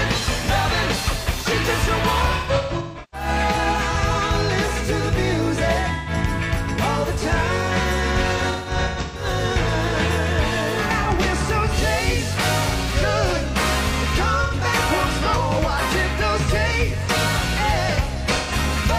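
AAC frame loss with concealment occurs six times. From 2.36 to 3.28 s and from 8.37 to 9.25 s, roughly half a second of audio is lost in scattered dropouts, with the longest runs around 150 ms. Shorter gaps fall at 5.94–6.10 s, 11.01–11.06 s, 14.43–14.54 s and 18.36–18.52 s. The decoder fills each gap from the last good spectrum, so the audio turns briefly smeared and noisy. A spectrogram shows blurred blocks the width of a frame.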